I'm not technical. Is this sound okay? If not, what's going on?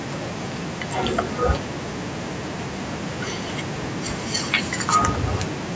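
Yes, the sound is in normal working order: it has passed through the usual microphone processing of a call, which trims away the very deepest bass and leaves nothing above 8 kHz, and none of that is a problem.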